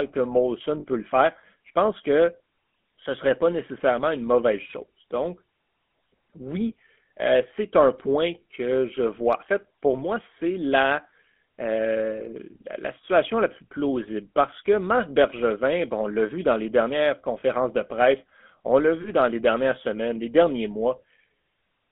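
A buzzy, gravelly roughness runs through the whole speech clip, with nothing above about 3.4 kHz and little below 200 Hz. This is the GSM full-rate codec, whose pulse-driven vocal-tract model, fitting 13 kbps, plainly coarsens the excitation on this telephone-band line.

Lost GSM frames appear as brief rough, metallic holds at 0.80–0.85 s, just before "le faire je pense", at 17.40–17.43 s, between "vu dans les dernières" and "de presse on l'a", and at 19.02–19.09 s, before "dans les dernières semaines". About 40 ms is lost at the first, 20 ms at the others, each gap patched by repeating the last good frame.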